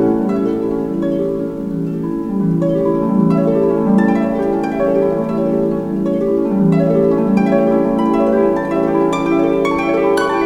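Throughout the clip, a block size mismatch (truncated) discards the tail of each block, likely 1024 samples written, leaving a steady 43.1 Hz buzz while the pace stays unchanged.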